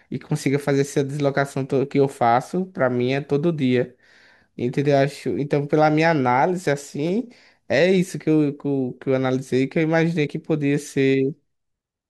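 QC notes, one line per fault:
7.07–7.09 s, repeated buffer: one 5.8 ms chunk of speech plays four extra times, back to back, with a hard join at each repeat. That length fits a 256-sample buffer. Looped this fast, the chunk is heard as a brief buzz rather than a stutter. Nothing is skipped: the speech resumes exactly where it stopped. That intact timeline is what separates it from a reservoir fault, where material goes missing.
10.26–10.28 s, broken MP3 bit reservoir: a short disturbance of about 29 ms, close to the length of one 26.1 ms MP3 frame. The likely cause is that the decoder took its borrowed reservoir bytes from the wrong frame after a break in the stream, so that stretch was rebuilt from mismatched data. Unlike the repeated buffer, nothing loops. The fault lasts about one frame and leaves no run of identical repeats.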